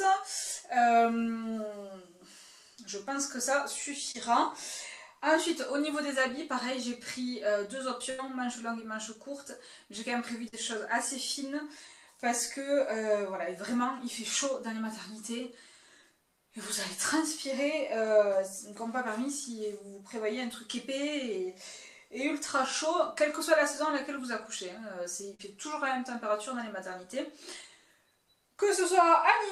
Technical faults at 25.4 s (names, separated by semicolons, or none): burst of packet loss